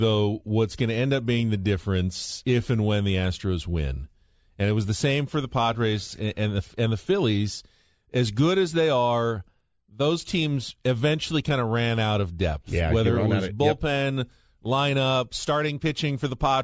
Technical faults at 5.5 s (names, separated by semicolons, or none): none